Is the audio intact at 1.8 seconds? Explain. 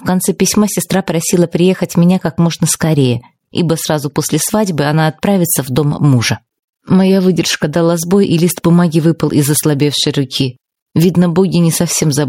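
No. Gain pumping runs through the whole clip, including 1.8 seconds, with the level swinging by around 10 dB. The likely cause is gain set far too high, with a fast limiter or compressor clamping down on every peak and squashing loud and soft parts together.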